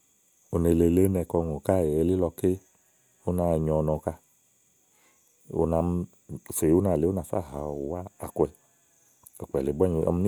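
No technical faults are audible.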